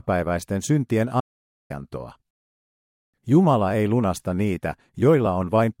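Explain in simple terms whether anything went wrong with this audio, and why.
Something in the recording chain most likely lost its input for a moment, perhaps a loose connection or a brief mute, while the recorder kept running and wrote pure silence in its place. That is an audio dropout to silence. At 1.21 s the speech cuts off abruptly, and it returns at 1.70 s. For that half second there is nothing at all, not even background hiss, and whatever was said in that gap is gone.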